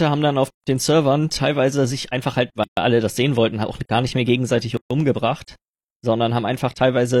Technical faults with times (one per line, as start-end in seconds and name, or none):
0.50-0.64 gap at a join of encoded pieces
2.64-2.77 gap at a join of encoded pieces
4.77-4.91 gap at a join of encoded pieces